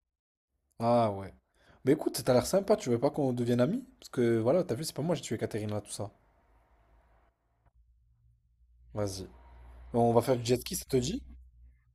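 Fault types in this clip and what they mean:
Nothing stood out as a technical problem on listening to this recording.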